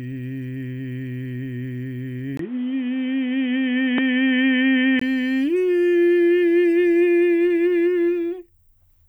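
At 2.37 s the recording input was likely switched to a poorer device, and it returns to the original at 5.01 s. The switch is marked by a brief dropout of about 20 ms. For those few seconds the music loses everything above 3.8 kHz, turning dull and boxy. The level shifts by roughly 5 dB, and new background noise sits about 35 dB under the music. The full, brighter sound returns at 5.01 s.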